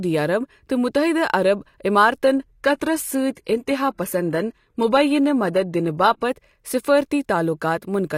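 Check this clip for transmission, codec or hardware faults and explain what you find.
Adaptive stream at a lower bitrate, from 2.24 to 6.24 s. When throughput fell, the player switched to a cheaper rendition and back, with no gap. The speech abruptly picks up codec artefacts, with nothing above 15 kHz, which fits a drop from 96 kbit/s AAC to 20 kbit/s HE-AAC.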